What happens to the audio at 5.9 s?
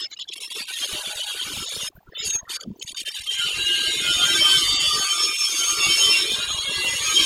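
At 5.9 s the speech is still caught by overdone noise removal, which runs through the whole clip: an overly aggressive noise reducer pulls bands near its noise estimate almost to nothing, taking quiet parts of the voice with them and leaving a near-silent background with twinkling specks, seen as scattered isolated dots in an otherwise empty spectrogram.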